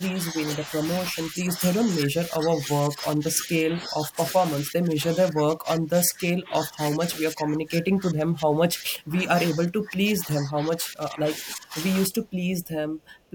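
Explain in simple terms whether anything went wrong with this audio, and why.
Yes, two things went wrong. The first is most likely speech suppressed in double talk: when both ends of a call talk at once, the echo canceller can't tell the local talker from the loudspeaker echo, so it turns everything down. Here the speech dips noticeably at 0 to 0.39 s, 1.11 to 1.61 s, 1.84 to 2.68 s, 2.87 to 4.18 s, 4.61 to 9.37 s and 9.53 to 11.75 s, with the deepest and longest losses in the last two stretches.

The second is a cut-off end. The final chunks of audio were never written or played out, so at 12.06 s the sound stops in the middle of speaking rather than fading naturally. From there to the end there is only dead digital silence, with no trailing off of the last sound.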